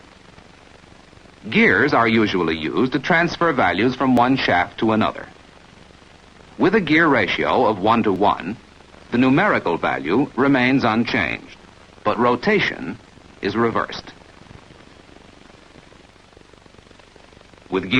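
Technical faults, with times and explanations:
4.17, 8.16, 12.15 and 16.14 s: overlap between stream segments. Adjacent 4-second segments have overlapping time stamps, so the player discards a few milliseconds of sound. The waveform jumps, giving a tiny skip every 4 seconds.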